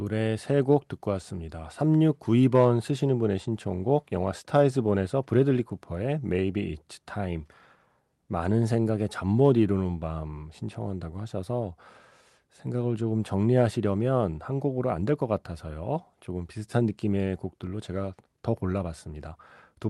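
There are no technical faults to describe in time order in this speech, which carries the ordinary character of a call codec.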